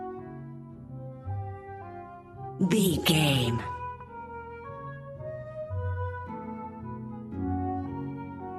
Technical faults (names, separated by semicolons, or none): repeated frames